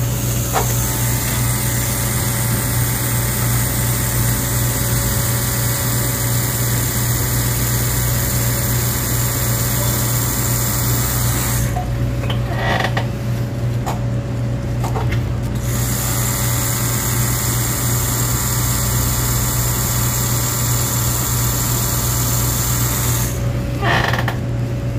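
From 14.94 s to the end of the clip, Wi-Fi interference is heard. A nearby Wi-Fi radio is leaking into the audio circuit, which rectifies its transmissions into audible clicks. The radio's beacon repeats every 102.4 ms. That gives a steady ticking just under ten times a second. The ticks sit well below the main sound, roughly 30 dB down. They are faint but regular, and they persist to the final moment.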